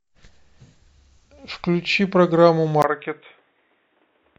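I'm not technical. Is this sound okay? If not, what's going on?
No. From about 2.82 s to the end, the voice turns dull and boxy and a little quieter, after a brief gap at the switch, with a faint new background noise. This is likely an input switched to a poorer device, one that cuts everything above 3.8 kHz.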